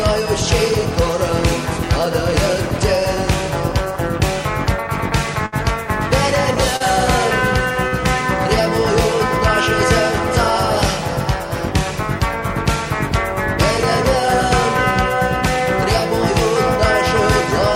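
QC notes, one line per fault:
5.46 to 7.94 s, short stall from a late packet, three times: 5.46 s for 65 ms, 6.76 s for 38 ms, 7.88 s for 39 ms. Each time a packet arrived late and the jitter buffer emptied. The last sound was stretched until it came, so it hangs briefly with a faint buzz or dip. Nothing is lost, but timing slips later.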